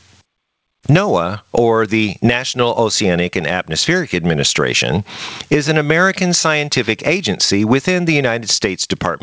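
A gain stage most likely set far too hot for the microphone, with a fast limiter clamping it on every loud syllable, causes gain pumping throughout this speech clip. The gain swings by around 25 dB under loud sounds, leaving the speech squashed and flat in level. The call path's band limit, with nothing above 8 kHz, fits a G.722 wideband link.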